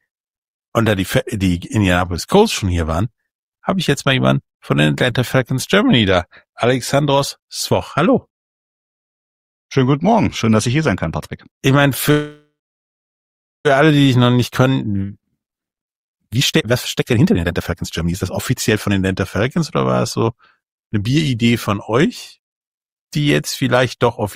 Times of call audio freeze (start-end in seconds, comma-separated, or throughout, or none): 12.11-13.67